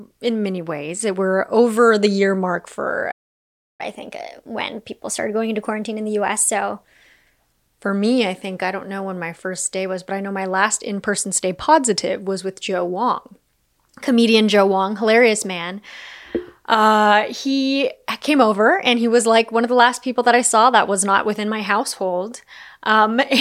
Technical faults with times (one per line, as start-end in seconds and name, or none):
3.11-3.81 playback stall
3.81-6.81 catch-up at higher speed